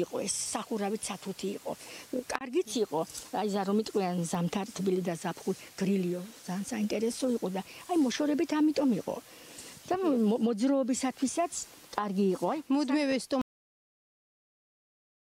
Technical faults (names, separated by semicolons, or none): loud pop; cut-off end